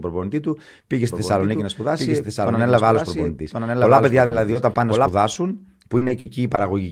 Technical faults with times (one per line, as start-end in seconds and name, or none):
1.08-5.08 doubled audio track
4.25-4.33 burst of packet loss
4.53-4.77 short concealed packet loss
5.33-5.37 short concealed packet loss
5.97-6.59 repeated packet loss (robotic sound)